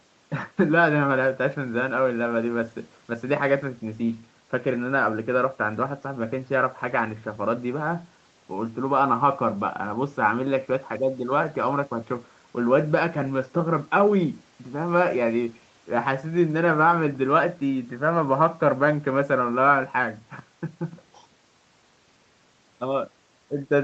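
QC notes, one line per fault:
No faults are heard in this speech clip. The top end stops at about 8 kHz, as expected from the call microphone processing and the Opus codec on the WebRTC call path.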